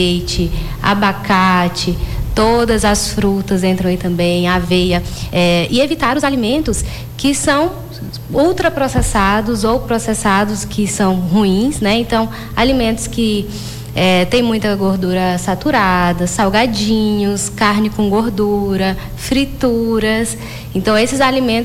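From 4.62 to 6.88 s there is a time-stretched section. The audio runs about 1.65 times faster, rushed, with pitch unchanged. Software squeezing it to fit is the likely cause.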